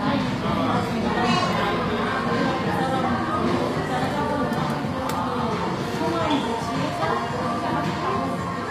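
Throughout the clip the treble sounds gritty and metallic. Bright, noisy detail has a synthetic sheen that doesn't quite belong to the lower range beneath it. This is likely HE-AAC compression at a low bitrate, about what 24 kbps would give. The codec keeps only the lower spectrum and fakes the top by copying lower bands upward under a coarse envelope. On a spectrogram the upper region shows repeated, blocky texture with misaligned harmonics, and everything stops sharply at 15.4 kHz.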